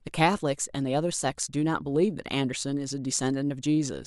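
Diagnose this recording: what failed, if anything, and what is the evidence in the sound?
Nothing failed, and no stage of the chain shows an audible fault anywhere in this speech recording.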